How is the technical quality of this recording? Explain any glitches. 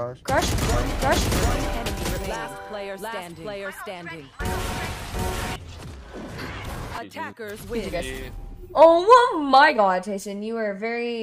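One fault stands out. A doubled audio track runs from 0.74 s to 5.56 s. A second, full-band copy trails the original by roughly 0.7 s at about equal loudness, likely from a slower capture path or misaligned edit, giving a dry, abruptly starting and stopping echo.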